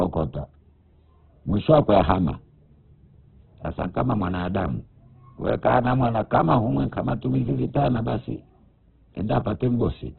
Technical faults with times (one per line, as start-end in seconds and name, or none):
0.00-10.19 Opus compression